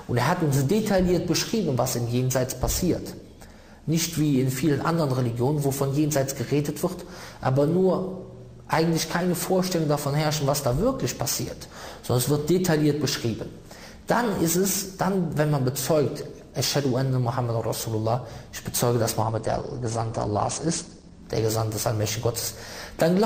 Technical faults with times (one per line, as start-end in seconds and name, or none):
19.23-21.23 adaptive stream at a lower bitrate